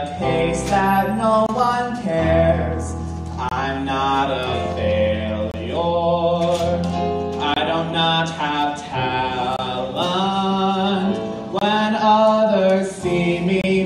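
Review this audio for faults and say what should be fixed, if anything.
A gap between chunks appears seven times: at 1.46–1.49, 3.49–3.51, 5.51–5.54, 7.54–7.56, 9.56–9.59, 11.59–11.61 and 13.61–13.64 s. Each is a 25 ms hole, repeating every 2.0 s, where the audio was split into chunks and silence was inserted at each join. Unlike a dropout, nothing is missing: the sound resumes exactly where it stopped. The strict regular spacing also separates it from random network loss. To prevent it, strip codec padding and schedule each chunk to start exactly when the previous one ends.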